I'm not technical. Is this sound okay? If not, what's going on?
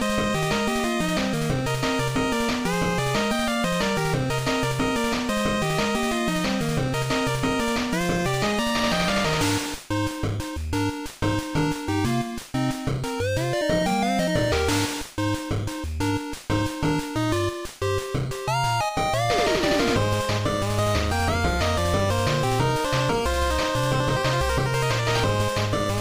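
No. There's imaging from linear upsampling throughout: the audio was converted to a higher quality setting crudely, so the treble sounds dull with a faint metallic shimmer.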